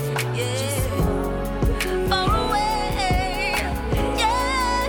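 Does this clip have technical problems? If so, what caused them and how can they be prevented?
No, nothing technical trips up this clip, so there's nothing here that needs fixing or preventing.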